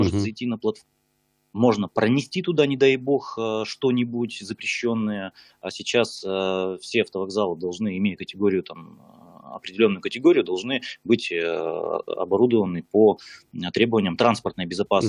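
No technical faults can be heard anywhere in the audio, and the signal stays continuous and intact throughout.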